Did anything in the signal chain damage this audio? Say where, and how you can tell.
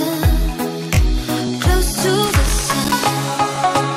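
Yes. There are two faults, at two different stages.

The first is overlapping chunks, at the driver or buffer stage. A brief stutter-click recurs at 0.43–0.45, 0.95–0.97, 1.47–1.50, 2.00–2.02, 2.52–2.54, 3.04–3.06 and 3.56–3.58 s. The spacing is regular, about every half second. At each join, roughly 21 ms of audio plays twice. Each new block starts before the previous one has finished.

The second is loose connector crackle, in the analogue wiring. From 2.26 to 2.93 s there is an irregular burst of scratchy crackle. It has no steady rhythm, unlike the clicks. A worn or dirty contact is making and breaking as it shifts. This chops the signal, and any DC on the line turns each break into a pop. The burst also covers the 2.52 s chunk join.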